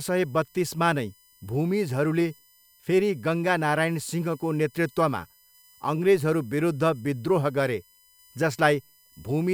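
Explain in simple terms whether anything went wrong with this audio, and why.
Something did go wrong here. There's a faint, steady high-pitched whine under the speech for the whole clip, and it's USB whine. A USB connection draws power in little bursts a thousand times a second, and that pulsing leaks into the audio through the power or ground wiring. The result is a fixed tone at 1 kHz plus its multiples, with the loudest part way up at 13 kHz, which is why it comes across as a thin, high whistle.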